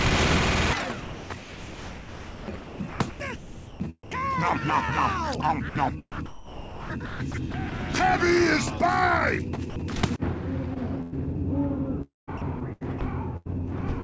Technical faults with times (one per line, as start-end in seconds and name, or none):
1.02-4.11 sound chopped by the voice detector
5.69-5.75 sound dropped by the voice detector
6.12-7.72 sound chopped by the voice detector
9.70-9.76 sound dropped by the voice detector
10.74-11.14 sound chopped by the voice detector
12.02-13.01 sound chopped by the voice detector
13.37-13.47 burst of packet loss
14.01-14.04 short concealed packet loss